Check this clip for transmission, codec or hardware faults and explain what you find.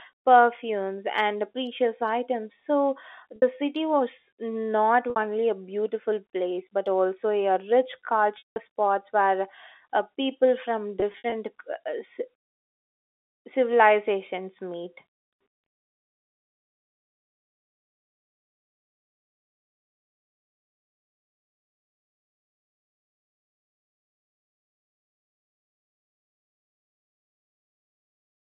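Yes, there is packet loss with pitch repetition, heard over a G.711 telephone-band line. Gaps occur at 3.36 s, 5.10 s, 8.38–8.56 s and 11.0–11.32 s. The receiver repeats the last pitch cycle, so 60 ms gaps buzz briefly, and the 180 ms gap fades out.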